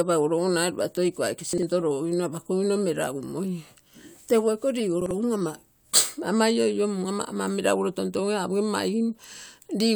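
Around 1.53 to 1.63 s, just before "logogino apakogino", and again at 5.02 to 5.11 s, you get chunks out of order: a roughly 46 ms block lands one chunk late, so the speech briefly jumbles at the hard joins.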